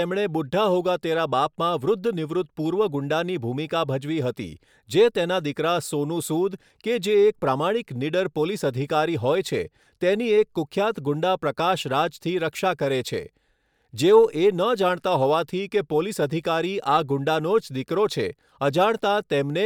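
No audible technical faults turn up anywhere in the recording.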